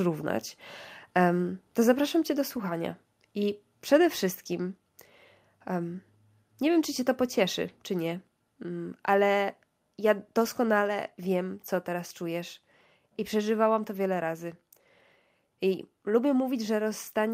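At 2.49 s the voice and background drop together by about 2 dB, most likely a microphone volume stepped down by call software reacting to loud input.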